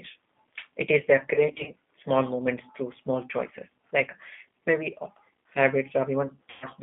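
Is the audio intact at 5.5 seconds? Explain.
No. At 5.5 seconds the speech carries G.729 codec damage, as it does for the whole clip. This low-rate VoIP codec rebuilds each 10 ms frame from a vocal tract filter, a pitch predictor and a few coded pulses, which fits an 8 kbit/s rate. The line passes only 200 Hz to 3.5 kHz. The speech stays intelligible but sounds muffled, rough and plainly synthetic.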